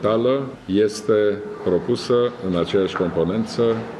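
No technical faults can be heard anywhere in this audio. There is nothing in it that calls for a fault description.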